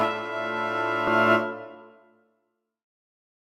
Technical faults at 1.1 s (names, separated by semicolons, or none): skip ahead